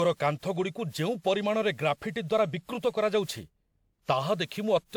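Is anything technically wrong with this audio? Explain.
Yes, there's one problem, and it runs through the whole clip: generation loss. The speech has that swirly, smeared, hollow quality, and consonant attacks are blurred. That's more damage than a single lossy encode would leave. It's likely the result of decoding and re-encoding around seven times, in a way that fits a WMA chain at 128 kbit/s. Each pass quantises on a shifted frame grid, so the noise piles up. The top end still reaches about 20.1 kHz.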